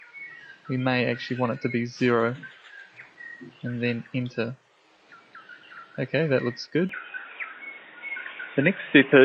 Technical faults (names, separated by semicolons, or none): input switched to a poorer device